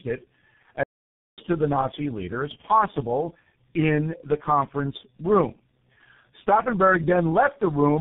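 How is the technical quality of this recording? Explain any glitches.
The technical quality is poor: the speech is degraded throughout by repeated coding, and the sound cuts out once near the start.

Tandem speech coding runs through the whole clip. The signal passed through three low-rate speech codecs in a row, G.723.1, then GSM full rate, then G.723.1 again, joined by G.711 links. Each coder re-encoded the previous one's damage, leaving the speech rough, muffled and warbly.

A playback stall runs from 0.83 to 1.38 s. The speech stops mid-flow and leaves about 0.54 s of silence before it resumes. The likely cause is the player running short of data or its thread being blocked, so output halted until it recovered.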